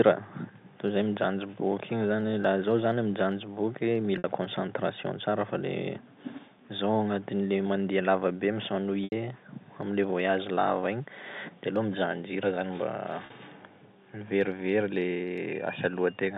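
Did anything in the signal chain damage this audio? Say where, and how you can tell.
Yes, packet loss with pitch repetition at the network stage. Just after "zaho zany mijanjy boky" at 4.18 s there's a 60 ms buzzy hold, after "mandeba lava be" at 9.04 s an 80 ms one, and at 13.26 s a 40 ms one. The receiver looped the last pitch period to cover the missing packets.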